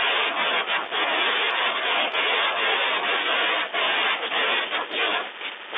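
The clip is speech carried over a G.711 telephone line, and nothing is technically wrong with it.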